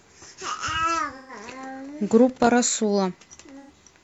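At 1.16 to 1.32 s, AAC frame loss with concealment sets in: roughly 128 ms of coded audio goes missing, which fits three dropped frames, and the decoder patches the gap from the last intact spectrum. The result is a brief smeared, noisy, phasey stretch in the speech. From 2.29 to 2.47 s, a loose connector crackle breaks and remakes the signal path in quick succession, chopping the audio into an irregular burst of scratchy crackle. A second, shorter frame loss at 3.60 to 3.70 s covers about 85 ms, consistent with two lost frames, and gives the same concealed, smeared texture.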